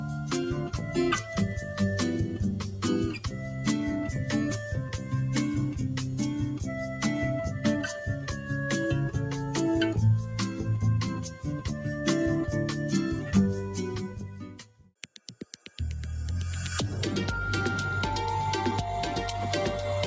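Throughout, a noise suppressor applied to music or sounds keeps riding the level by around 10 dB, so sustained parts pump and thin while attacks survive, unlike steady compression. The sound cut by the noise suppressor sinks by about 4 dB at 0.0 to 0.31 s, 3.24 to 3.6 s, 4.86 to 5.13 s, 8.16 to 8.49 s and 11.17 to 11.39 s, and by about 5 dB at 14.1 to 14.91 s. In each of these stretches the sound is mistaken for noise and turned down more than the rest, a ducking that follows the sound itself rather than a dropout. The band tops out at 8 kHz from the call chain.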